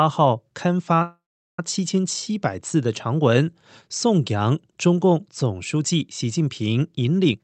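At 1.02 s the speech stalls in a call audio freeze lasting until 1.59 s. The last sound trails off as a short fading buzz, then about 0.4 s of silence, most likely because packets were held up and the jitter buffer ran dry. Speech resumes where it stopped, so nothing is lost, just a gap inserted.

Right at the end, from 7.25 s, there's a jitter buffer speed-up. Having built up extra delay, the receiver snips out tiny pitch-period slices repeatedly, about a tenth of a second in all, so the last stretch plays at 150% speed, hurried but at unchanged pitch. Over the Opus call path, highs stop near 8 kHz.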